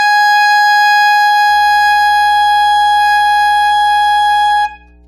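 From the first moment the music has no content above 13.4 kHz: the highest frequencies are simply missing, with the brittle, slightly smeared detail left behind by a lossy codec. This is low-bitrate audio saved at a high bitrate. The sound was likely first squeezed through a low-bitrate encoder, which fits something like a 48 kbit/s AAC stage, then re-encoded as high-rate MP3. A genuine high-rate encode would extend much further up, so the hard ceiling points to damage from the earlier pass.

At 1.49 s mains hum enters and stays to the end: a steady 60 Hz tone with a few low harmonics, sitting roughly 35 dB below the music. A ground loop or nearby transformer is feeding the power line into the signal. Unlike a bass note or rumble, it holds one fixed pitch and never changes with the music.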